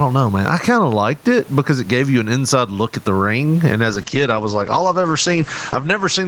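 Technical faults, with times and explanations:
Throughout: gain pumping. The gain swings by around 15 dB, squashing loud and soft parts together; the room noise sits about 36 dB below the speech. The likely cause is gain set far too high feeding a fast limiter.
3.9 s to end: call bitrate drop. The encoder falls from 32 to 10 kbps and stays at the lowest rate for 2.04 s. Bandwidth narrows from 20 kHz to 8 kHz, so the speech turns muffled and coarse. Unlike pumping, this alters tone and texture rather than level.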